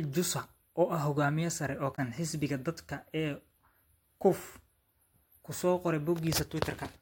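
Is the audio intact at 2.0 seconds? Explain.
No. Right after "ah hogaamiye sare oo", from 1.92 to 1.99 s, damaged data in the compressed stream makes the decoder misread frames and lose sync, producing a brief chirp or squawk. A spectrogram shows a short vertical smear of garbled energy; the waveform shows an abrupt discontinuity.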